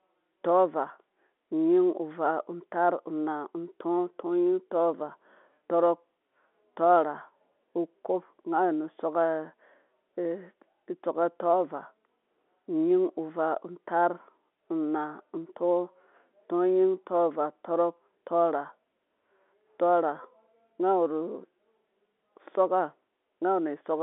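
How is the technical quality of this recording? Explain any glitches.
No glitches can be heard anywhere in the recording. The speech comes through G.711 telephone coding, so it sits in the narrow telephone band of roughly 250 Hz to 3.5 kHz, with nothing reaching above it.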